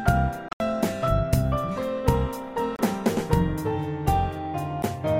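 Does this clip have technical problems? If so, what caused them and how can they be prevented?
Yes. Likely Bluetooth dropouts: packets missed the headphones, leaving abrupt gaps at 0.49–0.60 s (broken gaps, longest 73 ms), 2.76–2.79 s and 4.83 s, with sound resuming further along. Keeping the headphones close to the source, with a clear line of sight away from Wi-Fi traffic, helps prevent it.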